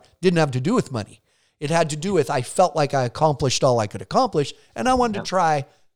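No technical faults detected.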